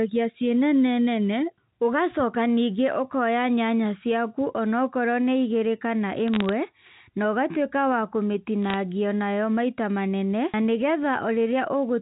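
From 6.28 to 6.49 s, and again at 8.70 to 8.74 s, bit errors on a digital phone line flip single samples on the mu-law link, at a rate around a tenth of a percent and then two tenths. Errors on high bits or on the sign of loud samples make sharp ticks, so the speech gets a brief crackle. The waveform shows isolated one-sample spikes, and the spectrogram shows thin vertical lines reaching the 4 kHz band edge.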